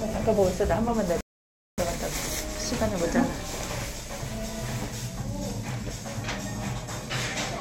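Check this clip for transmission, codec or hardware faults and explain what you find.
There's one fault here, a playback stall. At 1.21 s the sound cuts out mid-flow and stays silent for about 0.57 s, picking up again at 1.78 s. That's likely the player starving for data or having its thread blocked, so output simply halts until it recovers.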